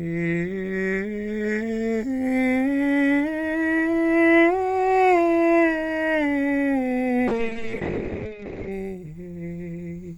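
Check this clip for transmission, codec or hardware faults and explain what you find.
One transmission fault is audible in this music clip. A call bitrate drop runs from 7.31 to 8.77 s. The call's bandwidth estimate fell, and the encoder starved the music of bits for about 1.4 s, consistent with a fall from roughly 48 to 6 kbps. The top end collapses from 20 kHz to 8 kHz, leaving a muffled, coarse, watery sound until quality recovers.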